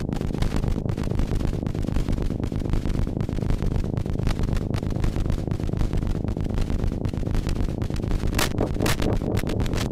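From start to end, every sound is followed by a second, full-band copy about half a second later and roughly 5 dB quieter, with no decay or room colour. This doubled audio track is likely a second capture through a slower path or an edit holding two offset copies.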